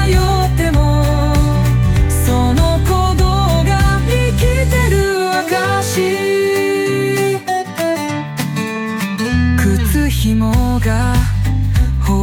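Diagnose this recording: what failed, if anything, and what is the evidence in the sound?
Nothing failed in this recording, and the sound carries no evidence of any fault.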